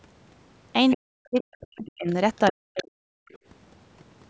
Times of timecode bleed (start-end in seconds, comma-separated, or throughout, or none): none